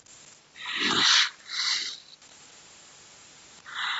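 Speech runs through call microphone processing, and the spectrogram shows nothing above 8 kHz, with the lowest bass trimmed. From 1.12 to 2.27 s the background is gated by the echo canceller: while the far end plays on the loudspeaker, the canceller pulls the microphone down by as much as about 40 dB, so the room tone dips in and out for roughly a second in total. On the waveform the noise floor between syllables collapses to near-flat stretches, and the spectrogram shows the background hiss blanking out in vertical bands before it returns. The same gating recurs briefly from 3.90 to 3.99 s, cutting the background for about 100 ms at the very end. Inside the first gated stretch, at 1.90 to 1.92 s, lost LE Audio frames leave about 15 ms, which points to a couple of frames. The LC3 decoder fills the gap by repeating the last spectrum with scrambled phase, so that instant sounds like a noisy smear instead of clean tone, and the spectrogram shows harmonic lines blurring into diffuse energy for that sliver. 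From 2.40 to 3.68 s a very faint delayed copy of the voice trails it by 183 ms, sitting around 40 dB below the speech. This is an echo leak, likely from the far end's loudspeaker audio slipping past its echo canceller and returning. On a spectrogram it appears as weak, ghostly duplicates of the harmonic patterns offset to the right.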